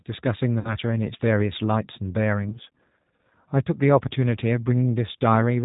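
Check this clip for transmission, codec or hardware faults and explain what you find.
Two faults are audible in this speech clip: a low-rate codec coloring the whole recording, and two brief dropouts that were patched over by the decoder.

Throughout, the speech sounds narrow, slightly rough and synthetic, with no content above 4 kHz and a plainly audible processed texture. This is the G.729 codec, which fits an 8 kbit/s G.729A stream. It does not send the waveform itself. It sends a vocal tract filter, a pitch predictor and a sparse set of pulses for every 10 ms frame, and the decoder rebuilds an approximation of the speech from them.

From 0.59 to 0.75 s, and again from 2.49 to 2.57 s, the speech smears into a buzzy tone or coloured noise that fades, and stays weak for a moment afterwards. This is VoIP packet loss concealed by the speech codec. About 60 ms of audio is missing in the first gap, which fits two lost packets, and about 30 ms in the second. 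The decoder filled each gap by extending its last pitch and filter with decreasing gain. Each frame depends on the previous one, so the speech took a little time to recover after the packets returned.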